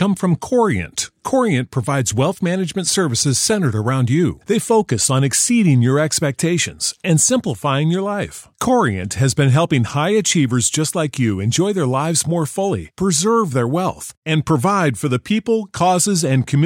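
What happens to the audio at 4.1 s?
Nothing goes wrong at 4.1 s; the speech carries on intact through that moment, with no dropout, click or distortion.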